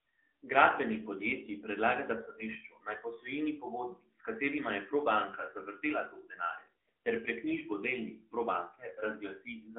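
This is speech passed through the AMR narrowband mobile codec for its whole length. Nothing above 3.5 kHz survives, and the band is squeezed to roughly 250 Hz to 3.4 kHz. Plainly audible buzzy coding damage points to a mid bitrate around 10.2 kbps.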